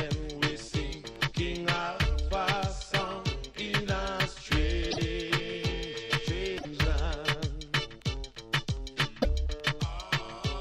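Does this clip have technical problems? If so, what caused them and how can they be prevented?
Yes. At 4.90 to 4.98 s, 6.57 to 6.66 s and 9.21 to 9.25 s the audio jumps forward and the next short stretch is disrupted. Each disruption lasts roughly two to three MP3 frames of 26.1 ms. The likely cause is a broken MP3 bit reservoir. Frames were dropped, so the following frames reached back for borrowed data and decoded bytes from the wrong frame. To prevent it, deliver the MP3 stream intact or cut and join it only at frame boundaries with reservoir-aware tools.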